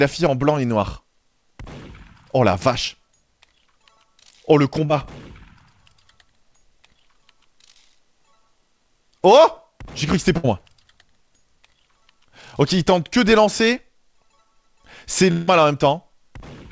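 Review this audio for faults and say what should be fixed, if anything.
Short concealed packet loss occurs at 2.88 to 2.91 s and 4.85 to 4.91 s. About 20 ms and then 40 ms of audio never reached the decoder in time, and the receiver extended the preceding sound to cover each gap. The result is a brief smear or wobble, and a short sound can disappear.

A burst of packet loss at 10.37 to 10.45 s removes about 60 ms in a row. Concealment continues the last sound and fades it, leaving a held buzz or a dimming hiss before the audio picks up further along with that stretch missing.

At 15.31 to 15.49 s, roughly 160 ms is replaced by a continuation of the last sound that fades out without ever reaching silence. The audio then resumes later with the intervening part gone. The likely cause is a long network dropout.

The band limit at 8 kHz fits the G.722 call path at 64 kbps. Preventing these faults means stabilising the network link, for example by prioritising call traffic and adding forward error correction or a slightly deeper jitter buffer so late or lost packets can be recovered.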